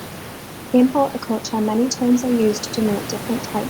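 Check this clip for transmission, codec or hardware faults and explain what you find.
No transmission, codec or hardware faults can be heard in this speech clip. Room noise sits in the background about 14 dB below the speech, which is part of the recording itself rather than anything added along the way.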